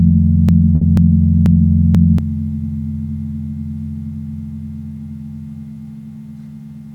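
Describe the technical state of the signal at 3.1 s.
At 3.1 s the signal is intact, with no dropout, distortion, glitch or other fault to be heard at that point.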